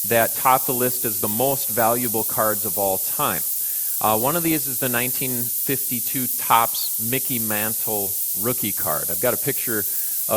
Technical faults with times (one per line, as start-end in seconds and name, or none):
0.00-10.37 low bit depth with noise shaping
0.00-10.37 MP2 compression
4.45-4.52 DAB burbling